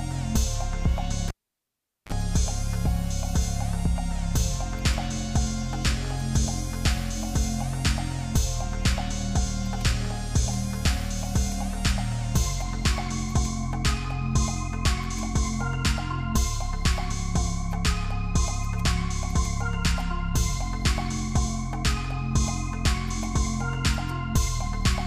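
At 1.28 s the cable gets pulled and plugged in while live: a pop, roughly 0.79 s of near silence, then a quick 36 ms blast of 50 Hz mains buzz as the tip touches first, and another pop as the sound returns around 2.12 s.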